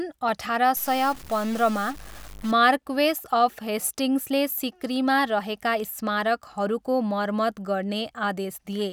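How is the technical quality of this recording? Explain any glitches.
The recording has one fault: a short stretch of stuck-bit distortion.

From 0.76 to 2.51 s the speech turns harsh and buzzy, and the quiet gaps fill with a gritty noise. The likely cause is a stuck bit, one data bit held fixed, so about half the samples jump by a step of about -35 dBFS. The errors follow the waveform and flip around zero crossings.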